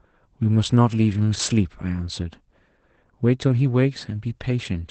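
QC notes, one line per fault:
throughout, Opus voice compression: the speech sounds muffled, hoarse and faintly robotic, with nothing above 8.6 kHz. The SILK coder's wideband limit removes the top, and coarse coding of the excitation, which fits a rate near 12 kbps, roughens the voice.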